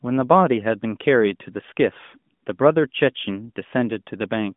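No technical faults are audible.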